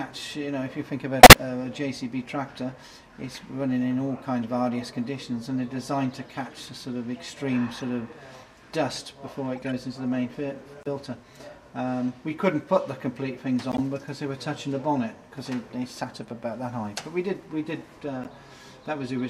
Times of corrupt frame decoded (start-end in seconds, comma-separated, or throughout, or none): 1.20-1.34, 2.33, 7.80-7.83, 9.56-9.73, 10.83-10.87, 13.71-13.80, 16.14-16.18, 18.23-18.27